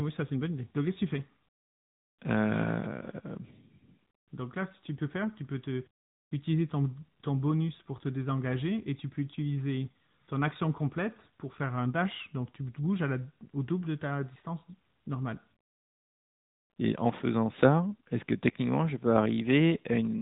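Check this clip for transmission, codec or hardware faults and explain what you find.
The speech has passed through an AMR narrowband mobile codec for its whole length. AMR-NB resamples to 8 kHz and rebuilds speech from a vocal-tract model excited by a few pulses per short subframe, so no content survives above about 3.8 kHz. The coding damage is plainly audible, with a mid-range mode near 10 kbps. The result is dull, phone-band speech with a buzzy, somewhat synthetic edge on every sentence.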